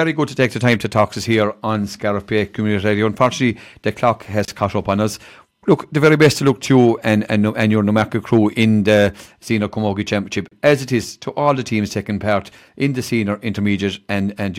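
A speech recording with gaps at a join of encoded pieces: short silences at 4.45 s (about 30 ms) and 10.48 s (about 34 ms), six seconds apart. The chunks were encoded separately and butted together untrimmed, so each encoder's start delay and end padding drops out the sound before it picks up again.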